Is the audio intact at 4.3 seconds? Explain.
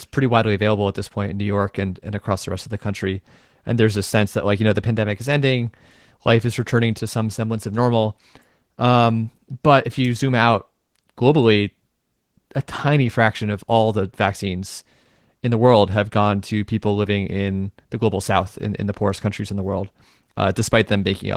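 No. At 4.3 seconds the speech carries Opus voice compression, which runs through the whole clip. The sound points to a low bitrate of around 16 kbps in hybrid mode, with linear-prediction coding below 8 kHz and a transform layer filling the upper band. The excitation is coded coarsely, so the damage is plainly audible: the voice comes out muffled, hoarse and slightly robotic.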